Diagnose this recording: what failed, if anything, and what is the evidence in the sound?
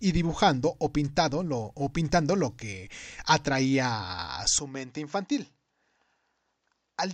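From 4.59 s to the end, the speech abruptly loses everything above 7.6 kHz, drops about 5 dB, and sits on a different, faint noise floor, with no gap at the switch. This is likely an input switched to a poorer device at the driver level; a codec bandwidth change would not shift level and background together.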